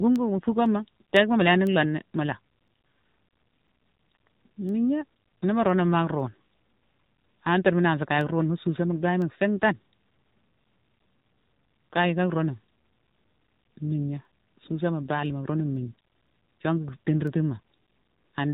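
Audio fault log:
Throughout: AMR narrowband mobile codec. The speech has been squeezed through the 2G/3G mobile speech coder at about 7.4 kbps, and the damage is plainly audible. Nothing above 3.8 kHz survives, so sibilants and consonant edges are dull and boxy. At this low rate the vocal-tract model is fed by only a few pulses per subframe, which gives the voice a buzzy, synthetic quality rather than a natural one.
0.16 to 18.28 s: word clock ticks. A sharp tick recurs at a steady rate of roughly one every half second, about forty in all across the clip. Each is a single-sample slip, the result of a receiving device running on its own clock instead of locking to the sender's digital stream. The two clocks drift apart by something like 50 ppm, so a sample is dropped or repeated each time they slide past one another.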